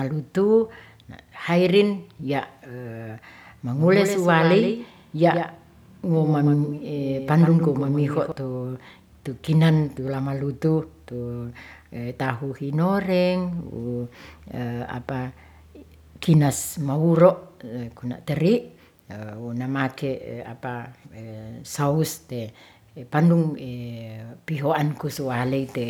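From 3.76 s to 8.32 s the speech carries a doubled audio track: a second, full-band copy of the same speech trails the original by roughly 150 ms, sitting around 10 dB quieter. It gives a slapback, stuttering effect with no decay or room colour, and it cuts in and out abruptly at both ends. The likely cause is the signal being captured twice, once through a slower path, or an edit leaving two copies out of step.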